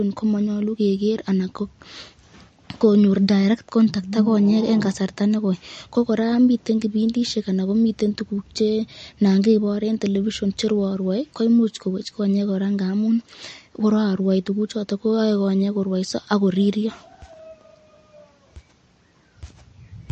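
A speech recording carrying plainly audible MP3 compression damage for its whole length. The treble stops abruptly, with nothing above 8.6 kHz, and the sibilants and consonant detail sound dull and smeared, with an unsteady, swirling texture in the upper range. That pattern is the likely result of an MP3 encoder starved of bits, one that fits a rate near 40 kbps, trimming high frequencies and dropping weaker spectral detail frame by frame.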